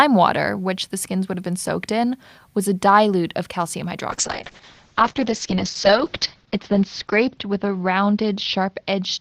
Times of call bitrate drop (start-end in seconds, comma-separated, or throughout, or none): 4.11-9.20